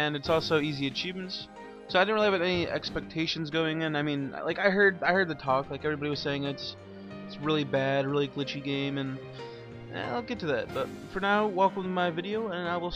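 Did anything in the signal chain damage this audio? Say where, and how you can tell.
No, nothing audible points to damage at any stage of the chain.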